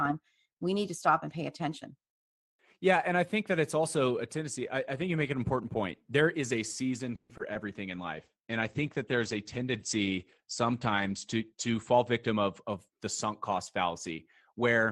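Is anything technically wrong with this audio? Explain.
Yes, the speech has four kinds of call-transport fault, clustered from mid-clip onward.

Call audio freeze, 7.15 to 7.31 s, right after "is a season": packets were likely held up in transit and the jitter buffer ran dry. The receiver stretched the last sound into a fading buzz or hiss for about 140 ms, then resumed where it stopped, so nothing is lost but everything after arrives later.

Short concealed packet loss, at 7.37 to 7.41 s and again at 7.53 to 7.57 s: each time about 20 ms of audio never reached the decoder. The receiver extrapolated the preceding sound and blended back, leaving brief smears or wobbles where real audio is missing.

Call bitrate drop, 7.9 to 12.69 s: the bandwidth estimate fell and the Opus encoder went from 32 to 13 kbps, holding the lowest rate for about 3.9 s. Audio bandwidth shrinks from 20 kHz to 8 kHz, so the speech turns muffled and rougher until recovery.

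Jitter buffer speed-up, 11.54 to 13.07 s, ending just before "sunk cost": the buffer held excess delay, so the receiver cut many pitch-period slices, about a tenth of a second in total. Speech runs roughly 6% fast at unchanged pitch, sounding hurried.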